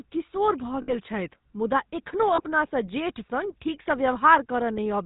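GSM full-rate codec damage runs through the whole clip. The speech is rebuilt from a vocal-tract model driven by sparse, evenly spaced pulses, consistent with the 13 kbps full-rate coder. Nothing passes above 4 kHz, and the voice has a plainly audible buzzy, gravelly roughness.

Lost GSM frames come at 0.82 to 0.95 s and at 2.36 to 2.41 s. Each gap is filled by repeating the last good frame's settings, so the speech smears into a rough metallic ring. The first gap suggests three 20 ms frames, and the second a single frame.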